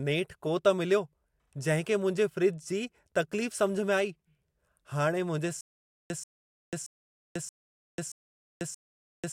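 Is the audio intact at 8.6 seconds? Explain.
No. At 8.6 s the audio is caught in a stutter with silent gaps that runs from 5.61 s to the end. The same 135 ms fragment of speech plays, then digital silence of about 493 ms follows, repeating every 627 ms, six times in all. The likely cause is a stalled stream replaying its last buffered fragment at each retry. Unlike random dropouts, the burst is identical each time and arrives at a steady pace, and the speech that belonged in those gaps is missing.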